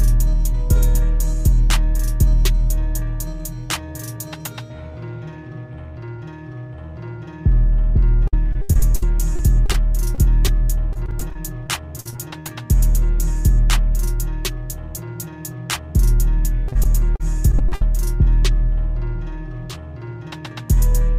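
From 8.27 to 9.75 s there's a stretch of repeated packet loss, the robotic kind. Chunks keep going missing, about a third of a second in total, with the longest hole near 70 ms. Each one gets patched by stretching out the last bit of sound, so about a fifth of that span is filler. You hear it as choppy, with bits dropping out.

Right after that come two short concealed packet losses, at 10.15 to 10.19 s (about 30 ms missing) and a tiny one at 10.47 s (about 10 ms). The decoder bridged each gap by extending the preceding sound and then blending back into the real signal. They come across as a quick smear or wobble rather than a dropout.

The robotic packet loss returns from 10.93 to 12.49 s. Around a quarter second is lost in small pieces, the longest near 57 ms, and about 17% of that stretch is patched. It's a bit less dense than the first run but has the same chopped quality.

One more burst runs from 16.68 to 17.82 s, with about 220 ms missing and the largest gap around 60 ms. 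Nearly a fifth of that span is concealed, and it sounds choppy again.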